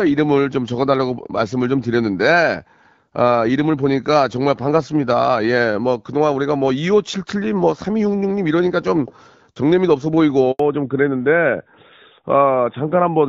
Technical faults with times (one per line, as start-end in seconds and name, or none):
10.51-10.59 handover gap
10.59-13.28 fallback to narrowband